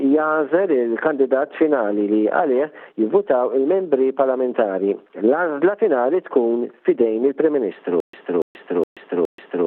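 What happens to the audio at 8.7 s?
At 8.7 s the audio sits in a stutter with silent gaps running from 8.00 s to the end. One 285 ms burst repeats four times, separated by 132 ms of digital silence, every 416 ms. Unlike plain dropouts, the same fragment returns, likely from a stalled stream replaying its last buffer.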